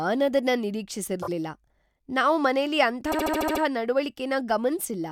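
Repeated frames occur twice, where a run of compressed frames was delivered more than once and the decoder played the same stretch of speech again. From 1.21 to 1.29 s, a 24 ms block, which fits a single frame, plays twice more, adding 48 ms as a short stutter. From 3.11 to 3.61 s, just after "ನಾವ್ ಮನೇಲಿ ಅಂಥ", a 72 ms block repeats seven extra times, stretching the speech by about half a second into a stutter.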